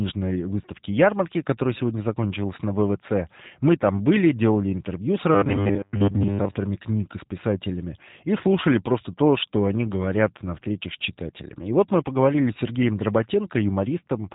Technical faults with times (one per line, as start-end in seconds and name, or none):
0.00-14.34 G.729 codec